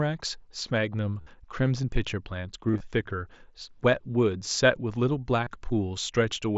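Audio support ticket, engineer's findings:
Concealed Bluetooth headset packet loss. Buzzy tone held at full level at 1.21–1.27 s (52 ms), 2.68–2.80 s (scattered, longest about 22 ms) and 5.44–5.47 s. Small warble as audio resumes. Headset link dropping packets. Receiver is filling gaps with recent waveform over mSBC wideband audio.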